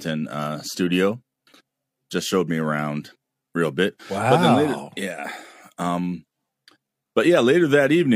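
No technical faults are audible anywhere in this speech.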